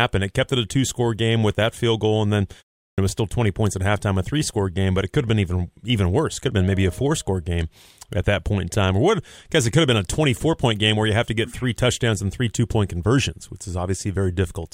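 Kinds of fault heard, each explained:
Clipped start after a pause: the output device sleeps during silence and must wake before passing audio again. After a 0.36 s pause, speech resuming at 2.90 s loses its first 79 ms, so it starts abruptly and is missing its opening sounds.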